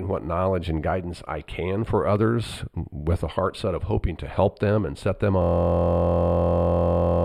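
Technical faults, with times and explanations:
Throughout: channel delay (comb filtering). One channel lags by a few hundredths of a millisecond; summed to mono, cancellations from around 7 kHz upward leave the speech thin and phasey.
5.42 s to end: system hang loop. After "them and set them", a 23.22 ms slice repeats at 43.1 Hz as a steady buzz, which fits a 1024-sample buffer cycling while the system froze.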